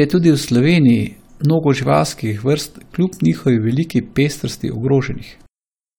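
No technical faults can be heard anywhere in this recording.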